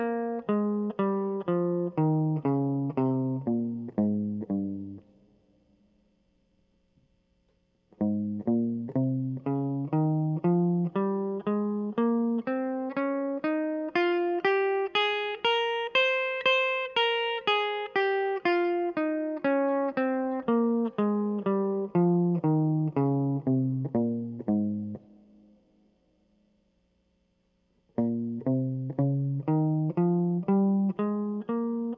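No technical faults can be heard in this music.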